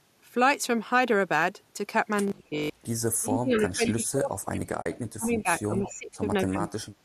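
At 2.5 to 2.58 s the speech dips briefly by roughly 10 dB. This is likely speech suppressed in double talk, where the echo canceller mistook overlapping talk for echo and turned it down. From 3.16 to 5.48 s the speech is pushed down much harder, by up to roughly 30 dB for around two seconds, again likely suppressed in double talk while the far side was speaking.

Within that stretch, at 3.53 to 3.61 s and 3.86 to 3.91 s, faint scraps of a delayed copy of the voice come through 217 ms late, at about 15 dB below the speech. This is likely echo leak: the far end's loudspeaker output reached its microphone, wasn't fully cancelled, and was sent back.

At 4.82 to 4.86 s there is a 40 ms soft-edged hole. This is AAC frame loss with muting. The lost frames' spectrum was zeroed, and the overlapping windows fade the sound out and back in. The length fits four lost 10 ms frames of the low-delay codec.

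From 5.66 to 6.23 s the speech sinks again by up to roughly 20 dB. This is likely speech suppressed in double talk. Inside it, at 5.84 to 5.94 s, another echo leak scrap returns 217 ms late at about 15 dB down.

At 6.49 to 6.85 s the speech nearly vanishes, dropping by up to roughly 35 dB. This is likely double-talk suppression once more.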